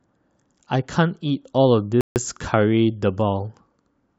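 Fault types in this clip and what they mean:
Rebuffering stall: the player runs dry at 2.01 s, sits silent for 150 ms, then picks the speech up exactly where it left off.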